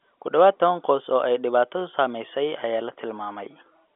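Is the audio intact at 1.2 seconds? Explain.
Yes, at 1.2 seconds the speech is intact, carried through G.711 telephone coding with its usual narrow band that stops below about 3.7 kHz.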